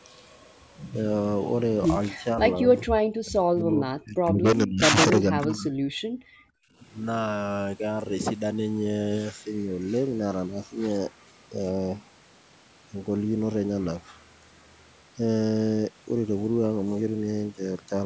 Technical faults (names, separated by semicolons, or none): speech suppressed in double talk; background gated by the echo canceller